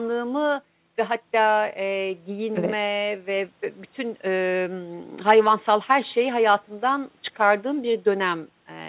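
Speech, with no technical fault heard anywhere in it. It arrives over a working WebRTC call path, and its narrow telephone band, with nothing above 4 kHz, fits G.711 mu-law coding.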